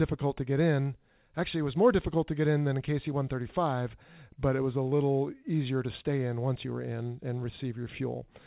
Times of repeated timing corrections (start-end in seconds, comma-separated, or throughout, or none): none